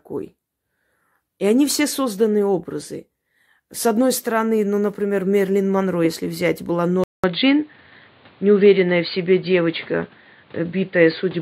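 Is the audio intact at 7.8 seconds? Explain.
No. From 7.04 s to the end, the speech loses everything above 4.7 kHz and turns dull and boxy. A 200 ms gap marks the switch, with a small level jump and faint new background noise. The likely cause is an input switched to a poorer device.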